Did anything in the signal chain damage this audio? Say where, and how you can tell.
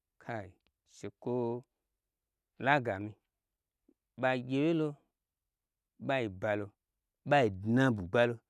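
No, nothing in this speech recording stood out as damage from any stage of the signal chain on listening.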